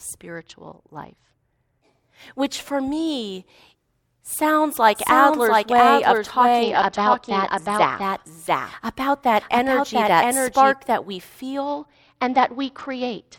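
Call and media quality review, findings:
Bluetooth SBC bit pool drop, 0.35–1.84 s: speech turns dull and gritty, treble lost, coarse quantisation noise. Consistent with the phone cutting SBC bit pool from 31 to 9, near 72 kbps, on a congested link.

Same SBC bit pool drop recurs 6.63–8.03 s and 11.66 s to clip end: identical dulled top end and grit, restoring between episodes.

Doubled audio track, 4.95–10.73 s: full-band second copy of speech trailing by about 0.7 s at roughly equal level. Dry, no room decay; copy begins and ends abruptly. Likely a second slower capture path or misaligned edit.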